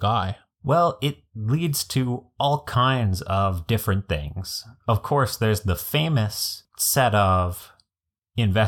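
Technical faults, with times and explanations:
7.59 to 7.63 s, chunks out of order: A 10 ms chunk of speech plays three chunks late, after the audio that should follow it. Nothing is lost, but the order breaks. Three hard joins result, heard as a brief garbled stutter.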